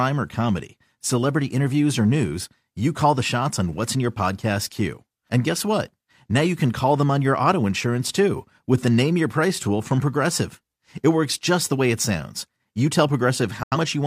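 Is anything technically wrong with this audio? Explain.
Yes. From 13.63 to 13.77 s there is a digital broadcast dropout: the receiver lost the signal and muted, fading out within 3 ms, which fits roughly two lost frames. Unlike a crackling analog fade, it is clean silence, and the speech skipped during the gap never returns.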